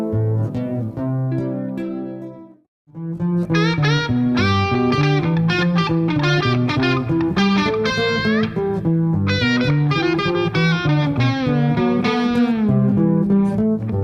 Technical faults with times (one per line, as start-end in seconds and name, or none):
none